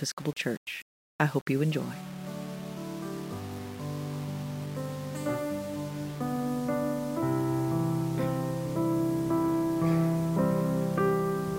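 From start to finish the audio carries a grainy, signal-following distortion that turns quiet passages gritty. The likely cause is low bit depth without dither, roughly 7 bits rounded, leaving error only about 20 dB below the signal.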